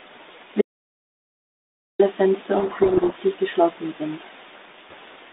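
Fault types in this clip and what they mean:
Audio dropout to silence: About 1.4 s of silence from 0.61 s, with no room tone, unlike a quiet pause; likely a lost input link.
Codec payload misread: From 2.56 to 3.19 s, just before "geschlossen sind", harsh distortion buries the speech because the G.726 code words are read in the wrong bit order, far rougher than ordinary G.726 hiss.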